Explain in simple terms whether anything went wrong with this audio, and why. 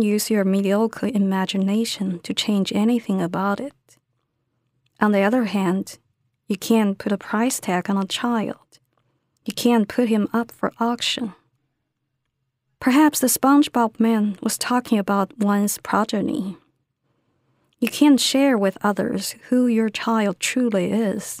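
Listening through the recording, nothing in the speech stood out as having gone wrong.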